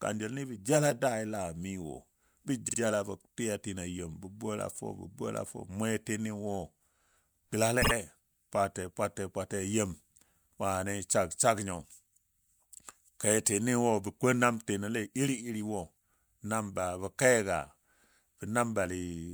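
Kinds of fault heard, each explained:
Repeated frames: a 48 ms block of the compressed speech plays twice more, near 2.68 s and 7.81 s, giving a brief stutter and adding 96 ms each time. Unlike a dropout, nothing is lost; the same sliver simply recurs.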